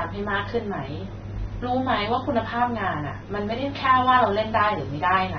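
AAC compression runs through the whole speech clip, nothing above 6.3 kHz, likely from AAC-LC coding at a low bitrate (fits roughly 24 kbps). The coder drops the top band and starves quieter spectral detail, so the sound is dull and smeared, with warbling, fizzy sibilants.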